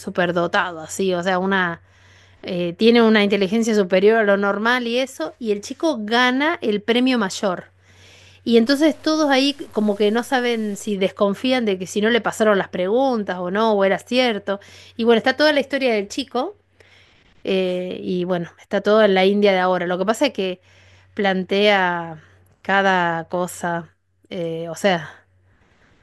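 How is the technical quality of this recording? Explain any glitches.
The recording has one clear glitch, between 8.66 and 10.94 s, where the speech turns grainy. The likely cause is low bit depth without dither: the signal was truncated to about 8 bits, leaving rounding error roughly 30 dB below the speech. Unlike steady dither hiss, this grit tracks the voice, roughening quiet syllables and sputtering as they fade.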